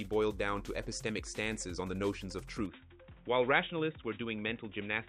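At 2.66 s the input likely switched to a poorer device. Nothing above 3.8 kHz passes from then on, so the sound turns dull and boxy, with faint added background noise.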